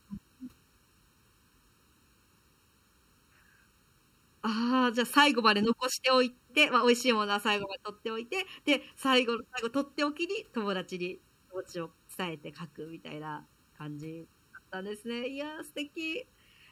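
From start to finish the speech carries channel delay (comb filtering). One channel arrives late by a little under a millisecond, and when the two are folded to mono the shared content cancels at evenly spaced frequencies, the first deep notch sitting near 700 Hz with further ones repeating up through the spectrum. The result is a hollow, phasey tone, since the fixed notches carve out parts of the voice's body.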